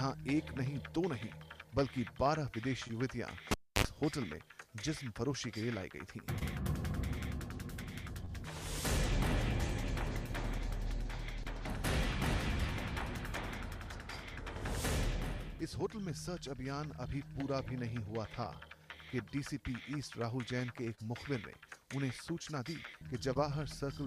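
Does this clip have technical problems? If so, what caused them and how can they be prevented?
Yes. From 3.51 to 3.85 s a cable pulled and plugged in back in while live: a pop, about 0.28 s of near silence, a roughly 58 ms burst of 50 Hz mains buzz as only the tip touches, then a second pop. The paired pops and hum set it apart from a digital dropout, which stays silent. Muting the channel or using locking connectors before handling cables prevents it.

At 8.25 s and 20.95 s there is short concealed packet loss. About 20 ms of audio never arrived each time, and the receiver extended the preceding sound for about 22 and 26 ms before blending back. The result is a brief smear rather than a gap or a sharp click. A wired connection, a larger jitter buffer or forward error correction prevents it.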